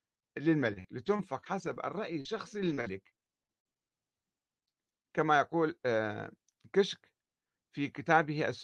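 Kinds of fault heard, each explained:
Repeated packet loss (robotic sound): Between 0.73 and 3.85 s the speech breaks into a rapid run of short holes, about eighteen of them, the longest near 58 ms. Each hole is bridged by stretching the preceding sound. That concealment covers about 15% of the stretch and rebuilds around 300 ms of audio, so the speech there turns choppy, with brief pieces missing between the patched segments.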